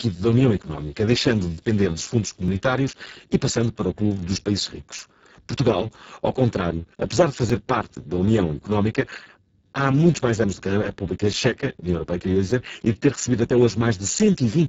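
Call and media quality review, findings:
Speex codec, whole clip: low-rate CELP mode with too few bits for the excitation. Speech comes out hoarse, noisy and edging toward robotic, consistent with roughly 6 kbps Speex. Band empty above 7.7 kHz, upper region only noise-like fill.

Overlapping chunks at 2.48, 4.99, 7.50, 10.00 and 12.51 s: 2.5 s chunk boundaries, each new chunk starting before the last ended. About 6.5 ms plays twice per join, giving a regular click/stutter, e.g. after "o clube dos países", between "ao contrário apesar de" and "parte da", and before "e de ter recebido".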